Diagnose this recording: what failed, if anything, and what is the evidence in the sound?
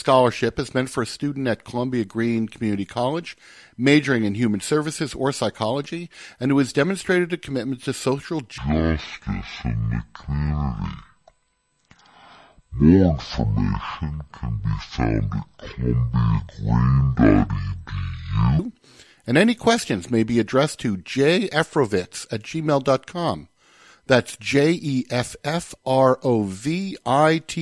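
The failure is a wrong sample rate at the playback stage, from 8.58 to 18.59 s. Everything drops a full octave (12 semitones) and runs at half speed, which fits 48 kHz material clocked out at 24 kHz with no conversion, so pitch and tempo fall together.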